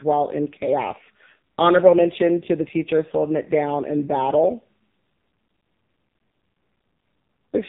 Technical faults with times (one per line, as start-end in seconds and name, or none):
0.00-7.68 AMR narrowband mobile codec